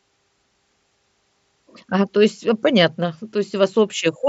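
Nothing goes wrong in this speech clip; it's just the usual sound of a Bluetooth mSBC headset link, with audio reaching up to about 8 kHz.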